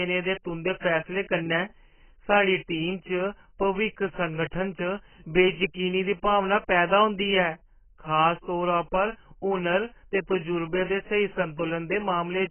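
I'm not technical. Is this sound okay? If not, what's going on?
No. The speech sounds dull and muffled all the way through. Everything above 3.1 kHz is missing, so crisp sounds like s and t lose their edge. The likely cause is heavy AAC compression, which squeezed the file by throwing away high-pitched detail.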